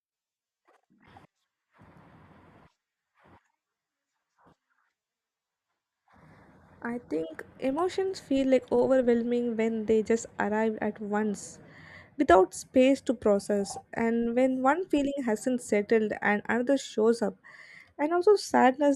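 Nothing stood out as a technical problem on listening to this recording.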